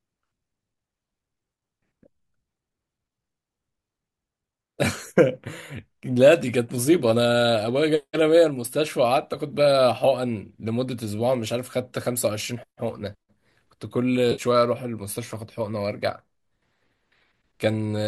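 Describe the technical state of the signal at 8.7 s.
At 8.7 s the speech is intact, with nothing audible beyond the light, steady texture of the low-delay AAC compression it likely passed through.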